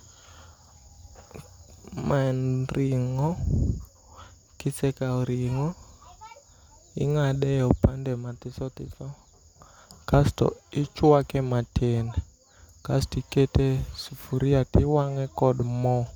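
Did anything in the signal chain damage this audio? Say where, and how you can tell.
No, nothing in the signal chain has damaged this speech recording. I can't point to any stage, from wiring through to playback, that has audibly altered the signal.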